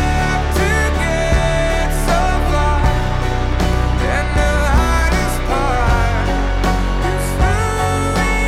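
CD scratch ticks run from 3.52 to 5.19 s: nine brief clicks of a few milliseconds each, one per disc revolution, where uncorrectable data was interpolated or muted.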